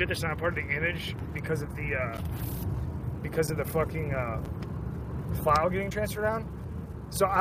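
Frames were likely dropped from the MP3 stream, a broken bit reservoir, so from 5.89 to 5.92 s the audio skips ahead with a 30 ms disturbance.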